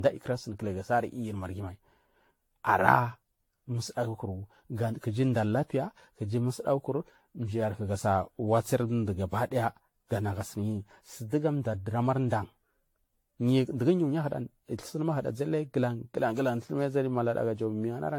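The speech has likely been through generation loss, passing through a lossy AAC-style encoder around ten times, each pass requantising on a shifted frame grid, so coding noise and spectral gaps pile up rather than staying fixed. Nothing survives above 18.6 kHz, which fits a 96 kbit/s setting, yet the whole clip sounds more swirly and hollow than that rate should give, with a smeared, watery texture and softened consonant attacks from start to finish.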